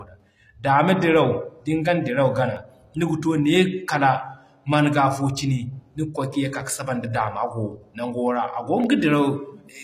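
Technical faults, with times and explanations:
Throughout: HE-AAC compression, likely. The treble above the coded band is rebuilt from copied lower bands, so sibilance sounds gritty and nothing reaches past 14.9 kHz, which fits a low bitrate near 24 kbps.
2.40–2.89 s: CD scratch ticks. Four brief ticks, each well under a millisecond, recur with each disc revolution as the player patches data its error correction cannot recover.
8.36–9.00 s: CD scratch ticks. Five short ticks, the longest about a millisecond, come once per revolution where damaged data is interpolated or muted.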